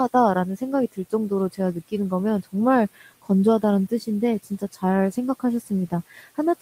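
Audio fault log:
0.57–1.93 s, 2.95–3.30 s and 4.43 s to the end: speech cut by the noise suppressor. It mistook parts of the speech for noise and pulled them down with the background, by up to about 16, 14 and 15 dB. Those moments sound swallowed or faint against room noise about 23 dB below the speech.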